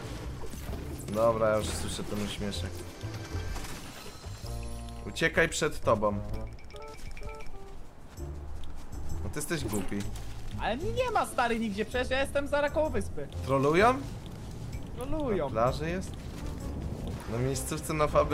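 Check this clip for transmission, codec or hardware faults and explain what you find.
No faults can be heard anywhere in the recording. The signal holds steady throughout, with nothing in it that calls for an explanation.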